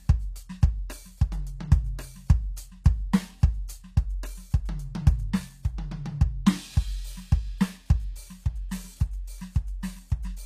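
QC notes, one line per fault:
Throughout: HE-AAC compression. The music was likely squeezed through a low-rate codec that keeps only the lower spectrum and synthesises the treble by copying lower bands upward under a coarse envelope; the plainly audible damage fits a rate around 24 kbps. The top end sounds false: its harmonics don't line up with those below, so cymbals and sibilant detail come out gritty and metallic, and nothing remains above 14.9 kHz.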